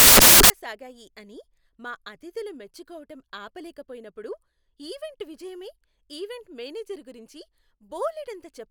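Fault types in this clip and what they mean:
samples built from the wrong bytes: the opening half second, 0.0 to 0.5 s, is a burst of loud, harsh broadband noise before the speech clears at "సాగాయి అని మా అతిథులు"; the reader misassembles each sample's bytes, so fast-changing low bits end up dominating every value.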